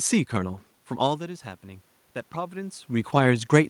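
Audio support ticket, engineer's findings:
Voice and room noise swell together, slowly, from 0.41 s to 2.92 s; background rises with the speech, so not the talker alone. Automatic gain rising: AGC stage saw input drop by about 14 dB (talker moving back near 1 s) and ramped gain up about 3 dB over roughly 2.5 s. Partial compensation only; level change at the microphone around 3 s is the talker again, room noise itself is the environment.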